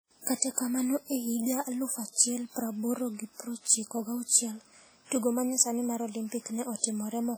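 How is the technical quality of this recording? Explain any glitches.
Technical quality is poor, with heavy codec damage audible across the whole speech recording. Throughout, the sound rings and smears, with a washy hiss that swells and fades with the signal, most likely from WMA compression at a low bitrate, around 32 kbps. Long transform blocks spread quantisation noise over tens of milliseconds, and quieter spectral detail is discarded.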